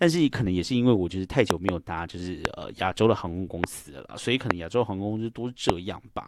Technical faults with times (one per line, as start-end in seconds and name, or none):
1.50-1.71 loud pop
2.45-2.47 loud pop
3.64-3.66 loud pop
4.51-4.53 loud pop
5.69-5.72 loud pop